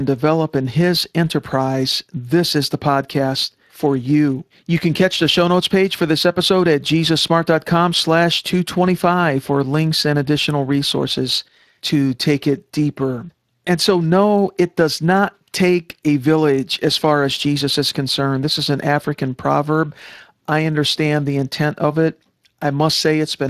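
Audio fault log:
Throughout: Speex codec. The speech sounds noisy and hoarse, with plainly audible damage from too few bits for the CELP excitation, which fits a bitrate near 22 kbps. Above 8 kHz the band is a shaped, noise-like fill, and nothing is present above 15.3 kHz.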